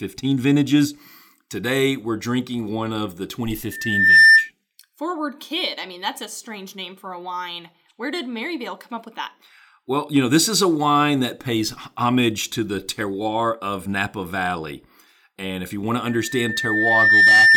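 Loudspeaker feedback squeal appears from 3.71 to 4.50 s and again from 16.06 s to the end of the speech at 17.56 s. The microphone is picking up the loudspeaker it drives, and at 1.8 kHz the loop's gain passes one, so that tone feeds on itself. The first squeal swells over about half a second to roughly 15 dB above the speech; the second builds more slowly, over about a second, to roughly 10 dB above it.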